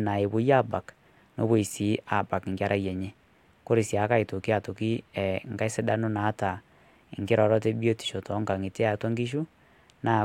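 No technical faults can be heard anywhere here.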